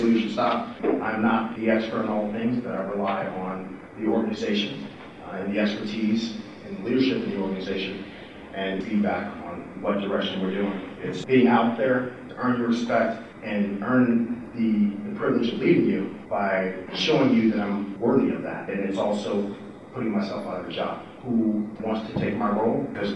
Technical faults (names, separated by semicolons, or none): none